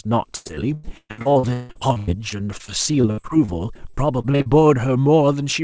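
From 0.36 s to 4.47 s the speech breaks up under repeated packet loss, giving the robotic sound typical of it: 34 separate gaps, the longest 160 ms, with about 30% of that stretch concealed. Each dropout is bridged by extending the last received sound, and the next gap arrives within a fraction of a second. Content above 8 kHz is absent, which fits a wideband call codec such as G.722.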